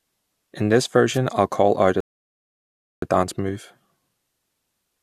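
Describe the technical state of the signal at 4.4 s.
At 4.4 s the signal is intact, with no audible fault at that point.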